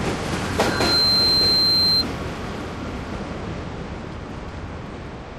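A recording of everyday sounds, interrupted from 0.59 to 2.05 s by loudspeaker feedback squeal: a 4.1 kHz tone swells over a bit under half a second to roughly 10 dB above the sound, as the microphone-to-speaker loop gain exceeds unity at that frequency and self-oscillates.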